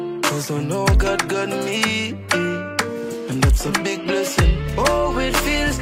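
No technical faults can be heard anywhere in the clip. Nothing in the audio points to a break, distortion or glitch along its path.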